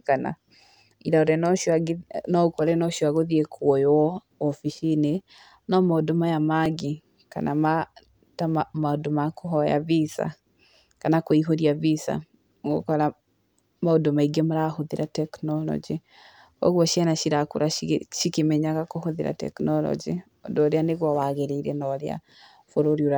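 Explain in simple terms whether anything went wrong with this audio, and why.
At 6.66 s the speech jumps forward a tiny step, with no gap of silence. This is most likely a dropped buffer (overrun): the recording program fell briefly behind, and the sound card overwrote a small block of audio before it could be saved. That sliver, under two milliseconds, is lost, and the audio on either side is spliced together directly.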